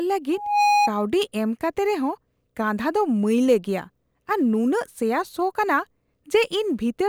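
From 0.33 to 0.92 s a loudspeaker feedback squeal sounds at 829 Hz. The microphone re-amplifies its own loudspeaker until that frequency runs away, swelling over about a third of a second to sit above the speech. A spectrogram shows one bright horizontal line.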